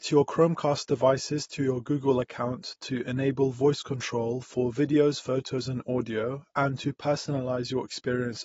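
Throughout the speech, the audio was likely squeezed through AAC compression at a low bitrate, the plainly audible damage pointing to something around 24 kbps. At that rate the encoder cannot afford the upper spectrum, so nothing survives above about 7.6 kHz, leaving the speech dull and closed-in. The remaining bands are coarsely quantised, which smears detail and gives sibilants and held sounds a fizzy, warbling texture from start to finish.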